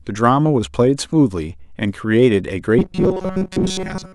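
At 2.79 s the speech turns into robotic sound from repeated short buffers, lasting to 4.15 s. The voice becomes a rigid, metallic buzz near 188 Hz. It still loosely tracks the syllables. For roughly 70 percent of that stretch, the audio is repeats of tiny fragments rather than new material. The likely cause is audio arriving too rarely, with the player repeating a fragment of about 5.3 ms to fill the gaps.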